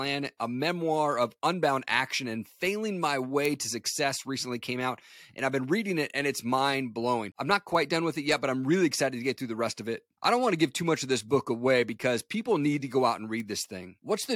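At 3.45 s, after "action and failing my", there's a bit error spike: one flipped bit jumps a single sample to about -8 dBFS, giving a sharp broadband tick. Quieter ones follow at 7.75 s (two samples, about -26 dBFS) and 13.40 s (about -20 dBFS).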